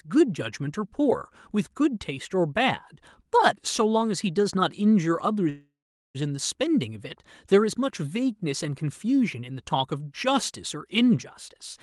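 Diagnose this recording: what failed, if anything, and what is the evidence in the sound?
Between 5.49 and 6.17 s there's a call audio freeze, likely caused by packets stalling on the network. The jitter buffer ran dry, so the last sound gets stretched into a fading buzz followed by about 0.42 s of silence. The speech then resumes where it left off. Nothing's missing; it's just pushed back by 0.65 s.

Right at the end, from 11.50 to 11.77 s, there's a jitter buffer speed-up. The receiver trimmed out short pitch-period-sized slices, roughly 50 ms in total, so that stretch plays at 115% speed with unchanged pitch. It sounds a bit hurried as the buffer drains its backlog.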